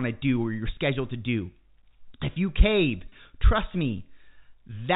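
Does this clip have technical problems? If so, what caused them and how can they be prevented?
Yes. Packet loss with pitch repetition occurs from 3.09 to 3.12 s, just after "you cave". About 30 ms of audio, consistent with a single lost packet, went missing, and the receiver filled the gap by repeating the last pitch period, which gives a brief held, buzzy sound. The telephone-band G.711 coding behind it carries nothing above 4 kHz. Prevent this with a more reliable network path, forward error correction, or a larger jitter buffer.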